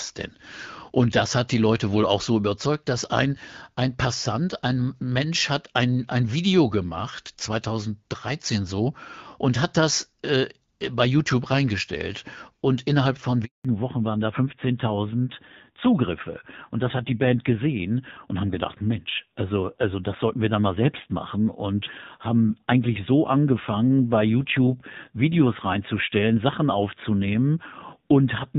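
At 13.45 s, right after "innerhalb von", the call was handed from one network to another and no speech frames arrived during the switch. This handover gap leaves 0.2 s of silence: the speech fades out within a few tens of milliseconds, and whatever was said in that stretch is lost.

From 13.65 s to the end, the link falls back from HD Voice to narrowband. The wideband AMR-WB coding before the handover sounds clear and only lightly coded, consistent with a rate around 12.65 kbit/s. After the fallback, everything above 4 kHz is gone, and the speech turns dull, muffled and somewhat rough, which fits narrowband AMR at a low rate near 7.4 kbit/s.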